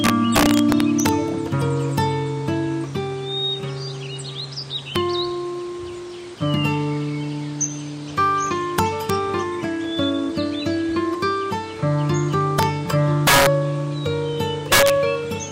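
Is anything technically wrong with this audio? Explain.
Yes. Integer overflow is audible at 0.04–1.09 s, 1.98 s, 4.96 s, 8.79–9.10 s, 12.59–12.63 s, 13.27–13.47 s and 14.72–14.90 s. The signal was pushed about 0 to 5 dB past the largest integer value, and instead of being limited, each peak wrapped around to the opposite extreme. The waveform jumps across its full range, producing violent, sharp cracks on loud moments, far harsher than ordinary clipping and strongest where the overdrive reaches about 5 dB.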